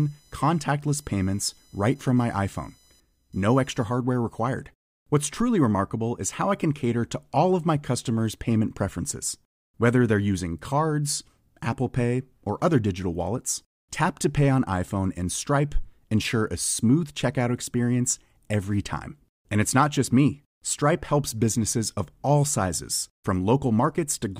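A speech recording, opening with computer activity noise from 0 to 3.86 s: a faint buzzing, chirping scratch pulsing at around 1 kHz, sitting roughly 35 dB below the speech. It tracks the machine's processing load rather than the talking, as changing current draw disturbs the audio circuit's shared ground. On a spectrogram it appears as a thin line near 1 kHz with stacked harmonics, flickering with no link to the speech energy.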